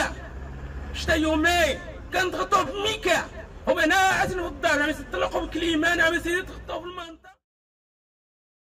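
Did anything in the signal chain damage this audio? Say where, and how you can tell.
No, nothing in the signal chain has damaged this audio. The only level change is a smooth fade-out that begins around 6 s and is complete by 7.47 s, with no click or hard edge, as an editor would apply it.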